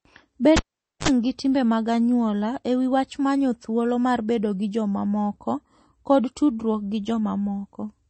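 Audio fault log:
Throughout: MP3 compression, likely. The speech sounds watery and swirly, with smeared consonant onsets and no content above 8.3 kHz, which fits a low bitrate near 32 kbps. A spectrogram shows a hard ceiling at 8.3 kHz and patchy, flickering high-frequency blocks that switch on and off between frames.
0.57–1.08 s: cable pulled and plugged in. A sharp pop opens roughly 0.47 s of near silence, then about 50 ms of 50 Hz mains buzz and a second pop before the sound returns on "gi timbe mag anyuola". The waveform shows two spikes around a flat gap, and the spectrogram shows stacked 50 Hz harmonics just before the second spike.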